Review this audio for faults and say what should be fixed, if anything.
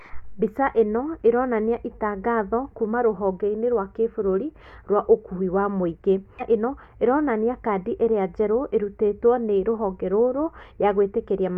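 At 6.37 to 6.42 s the speech is interrupted by a short glitch lasting about 50 ms, the mark of damaged data in a compressed stream. Corrupted bytes made the decoder misread those frames, lose sync and resume at the next valid frame header. Carrying the stream over a transport with checksums and retransmission, and verifying file integrity after transfer, would prevent it.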